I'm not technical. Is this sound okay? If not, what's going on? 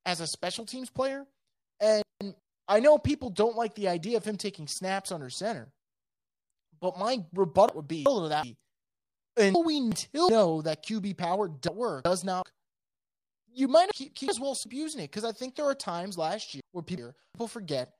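No. The speech has frames out of order six times: 2.02–2.39 s (just before "I know people don't"), 7.69–8.43 s, 9.55–10.29 s, 11.68–12.43 s, 13.91–14.66 s (between "you might" and "using it") and 16.60–17.35 s (after "there are times last"). In each, two neighbouring chunks of sound play in swapped order. These chunks are about 0.19 s each in the first and about 0.37 s in the rest. You hear a jumbled flutter. Unlike a dropout, nothing goes missing: every piece is there, just in the wrong sequence.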